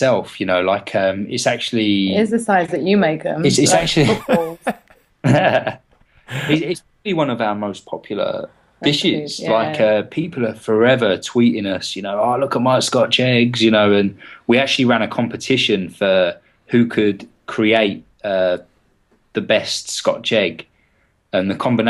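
No technical faults are audible anywhere in this audio.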